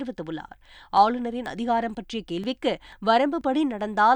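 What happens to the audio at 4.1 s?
Nothing goes wrong at 4.1 s: the audio is intact through that moment with no dropout, click or distortion.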